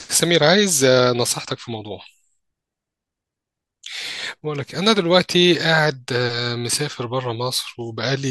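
No technical faults are audible.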